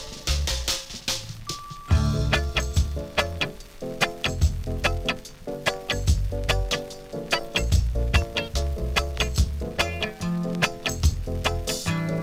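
Nothing here calls for comment, since the audio runs its whole course without a single technical fault turning up along the way.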